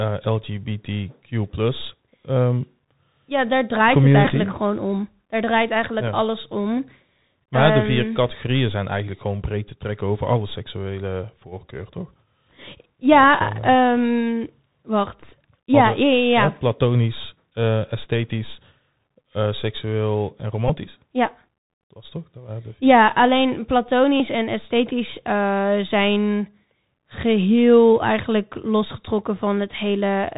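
Throughout the speech there is a dull, band-limited sound with scratchy s sounds, a granular hiss under the voice, and crackly distortion on loud bright moments. That is the Bluetooth CVSD headset codec, whose one-bit up-or-down coding, which fits a 64 kbps link, passes nothing above 4 kHz, and whose adaptive step cannot keep pace with fast, loud high sounds.

Short buzzy blips interrupt at 4.25 to 4.28 s and 20.68 to 20.72 s, each lasting about 15 ms, and a longer one runs from 24.17 to 24.21 s, about 26 ms. These are Bluetooth headset packet repeats. Voice packets were lost, and the last good packet was decoded again every 3.75 ms, producing a brief tone near 267 Hz.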